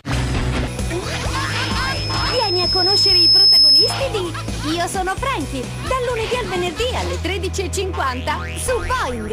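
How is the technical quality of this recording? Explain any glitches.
The recording has one clear glitch: loudspeaker feedback squeal from 1.36 to 4.07 s. A single tone at 5.2 kHz swells over roughly two seconds until it sits about 10 dB above the sound. A microphone is picking up its own loudspeaker, and at that frequency the loop gain exceeds one, so the tone keeps feeding itself. The gradual swell tells it apart from a steady interference whine, which is at full level from the start.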